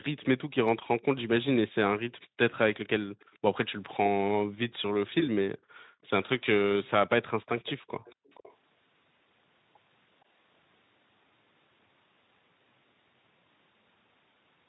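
From 0.21 to 1.02 s, 2.21 to 3.94 s and 5.09 to 8.56 s, a faint copy of the speech trails 464 ms behind, about 35 dB down at first and then about 25 dB. This is likely an echo leak past a far-end echo canceller, visible as ghost harmonics offset in time on a spectrogram. Between 2.27 and 3.2 s the background is gated by the echo canceller in brief dips, and between 5.57 and 6.01 s for a longer stretch. The room sound falls as much as 40 dB and appears as notched gaps in the waveform's noise floor.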